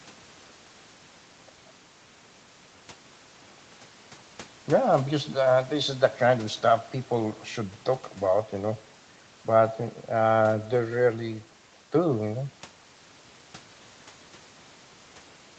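Nothing stood out on listening to this speech, which comes across as a normal call recording carried by the Opus codec, with nothing heard above 8 kHz.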